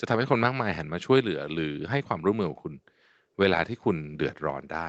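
No technical faults are audible.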